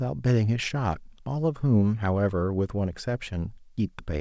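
No technical faults are audible.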